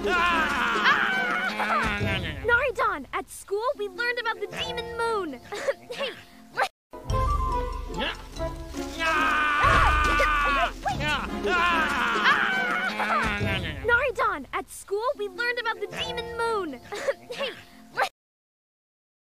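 From start to finish, a grainy, gritty distortion clings to the sound and shifts with it, with quiet passages roughened, the error sitting only about 35 dB below the signal. This is low bit depth without dither, likely from truncation to about 9 bits.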